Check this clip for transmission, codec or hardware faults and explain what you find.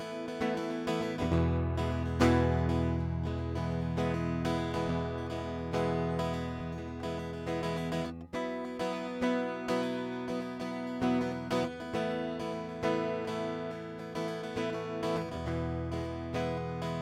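Nothing faulty can be heard in this music recording.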